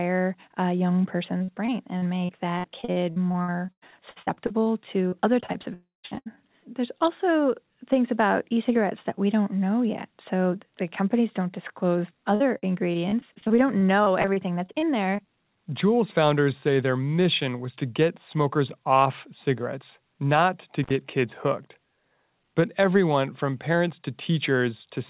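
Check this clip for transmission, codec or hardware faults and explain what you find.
Yes, there are transmission and hardware faults: bursts of packet loss, one longer dropout, and a brief contact break, all heard through a narrowband call codec with nothing above 4 kHz, consistent with G.711 A-law at 64 kbps.

Repeated packet loss (robotic sound) begins right after "a young", from 1.38 to 4.68 s, with 24 gaps up to 98 ms and about a quarter of the stretch concealed. It returns from 5.08 to 5.66 s with five gaps, and from 6.06 to 6.39 s with four gaps covering nearly half that span. After "the companies don't disclose" it runs from 12.35 to 15.26 s with 22 gaps of up to 52 ms. Each time, packets go missing in quick succession and the receiver repeats the last sound to fill every hole. The result is choppy audio with pieces missing.

A long network dropout, the likely cause, falls between 5.74 and 6.06 s. 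About 0.3 s of audio never arrives. The filled-in tail fades to roughly 170 ms of silence before the sound resumes, with that portion gone.

Intermittent contact after "off cigarettes not to", from 20.84 to 20.91 s: a loose connection opens for about 59 ms. The sound cuts out with crackle at both edges and faint hiss in between.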